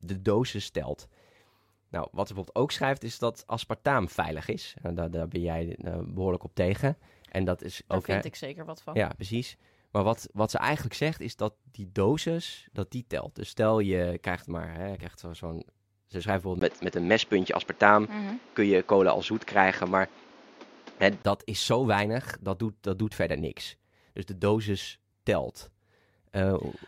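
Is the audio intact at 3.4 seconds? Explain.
Yes, at 3.4 seconds the speech runs cleanly with no audible fault.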